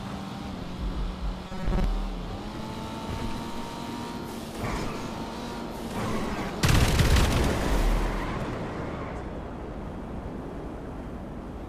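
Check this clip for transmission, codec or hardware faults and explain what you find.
One fault turns up: robotic sound from repeated short buffers, from 1.47 to 1.84 s. New audio is likely arriving too seldom, so a slice of about 5 ms is replayed in place of most of the real signal, forcing a rigid, metallic 188 Hz buzz onto the sound.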